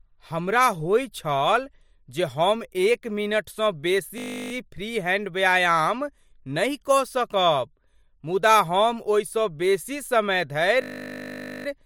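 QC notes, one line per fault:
4.18–4.52 s, system hang loop: after "जे हम एक मिनटसँ", a 20 ms slice repeats 17 times as a steady 50 Hz buzz, as the hardware cycled one short buffer while the system froze. Speech resumes at "फ्री हैंड व्यायाम नहि" with little or no audio lost.
10.82–11.66 s, system hang loop: after "बेसी समय", a 20 ms buffer loops 42 times, giving a longer 50 Hz buzz.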